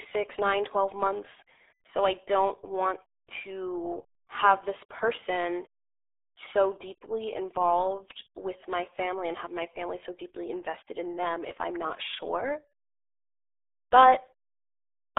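Throughout, the speech carries RealAudio 14.4 codec damage: a band of roughly 250 Hz to 3.6 kHz, nothing above 3.8 kHz, and a heavy gargly, muffled smear consistent with an 8 kbit/s dial-up coder. Unlike a clean telephone band-limit, the gargle is the giveaway.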